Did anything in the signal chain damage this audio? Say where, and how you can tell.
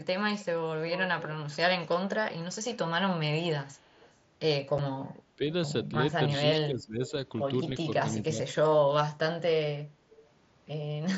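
Yes. A delayed copy of the speech, about 10 to 30 dB below it, trails by 311 ms at 0.87–1.57, 3.72–4.14, 7.07–7.11 and 10.1–10.28 s. This is likely echo leak from call processing on the loudspeaker side, where its canceller let loudspeaker pickup through.

A single abrupt hole about 7.5 ms long at 4.78 s is unconcealed Bluetooth headset packet loss. One frame on the headset link was dropped and never filled.

The speech dips by about 10 to 15 dB at 5.37–5.43, 6.54–7.12 and 7.8–8.59 s. This is likely speech suppressed in double talk, where call processing ducked the talker while both sides spoke.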